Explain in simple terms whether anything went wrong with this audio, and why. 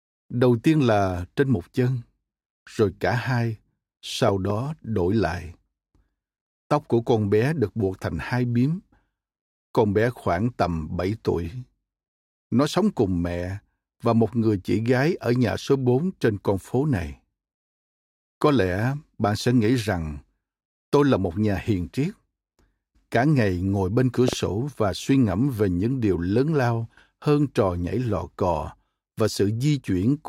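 A loud pop, a pair of sharp thumps, hits at 4.29–4.52 s, before "đổi lại", and at 24.28–24.35 s, after "ngày ngồi bên cửa". The speech continues underneath, unlike a dropout. The likely cause is an electrical jolt from a plug, switch or static.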